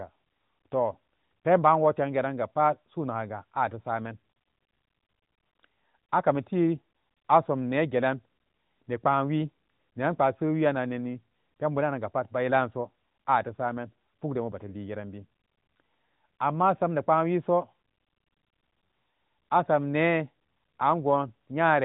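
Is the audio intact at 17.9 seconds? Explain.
Yes, at 17.9 seconds the speech plays through intact, with no dropout, glitch or other fault at that moment.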